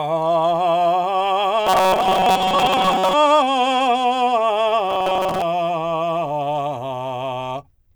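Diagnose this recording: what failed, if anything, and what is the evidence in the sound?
Likely a driver or buffer underrun: audio arrived too seldom, so a block of about 5.3 ms was replayed while most of the music was skipped. The result is robotic sound from repeated short buffers, a rigid 188 Hz metallic buzz at 1.67–3.15 s and 4.88–5.42 s.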